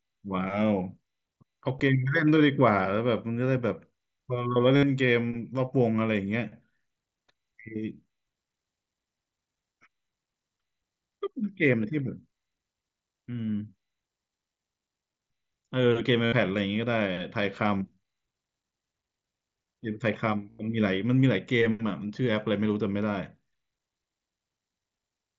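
Speech, with three brief buzzy, steady-level tones that end in a small warble as real speech returns, at 4.76–4.83 s, 16.25–16.33 s and 20.50–20.59 s. This is concealed Bluetooth headset packet loss: runs of lost headset packets were filled by repeating the best-matching recent stretch of waveform.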